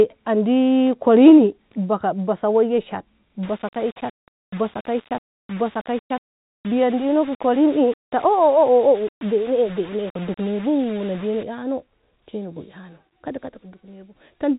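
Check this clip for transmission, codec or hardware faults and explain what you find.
One fault stands out. From 3.43 to 11.43 s the speech turns grainy, most likely from low bit depth without dither: undithered rounding to about 6 bits leaves signal-following distortion roughly 25 dB down, far coarser than the faint noise of the clip's 3.8 kHz-limited telephone coding.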